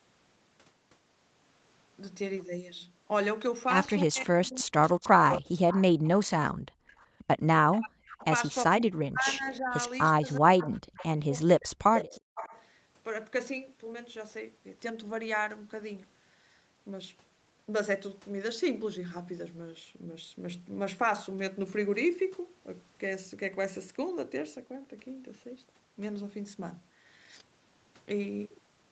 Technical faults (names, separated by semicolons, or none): echo leak; speech suppressed in double talk; background gated by the echo canceller